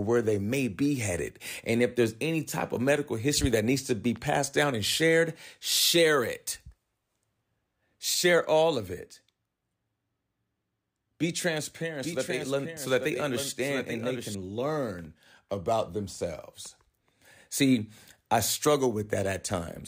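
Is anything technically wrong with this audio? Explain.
Yes. A doubled audio track runs from 12.03 to 14.35 s, ending just before "learn about themselves". A second full-band copy trails about a second behind, somewhat quieter and free of room colour, switching on and off abruptly, likely from a slower duplicate capture path.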